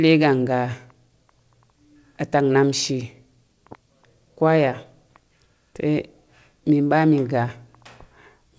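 No faults detected in this speech clip; the call path leaves nothing above 8 kHz, consistent with a wideband codec such as G.722.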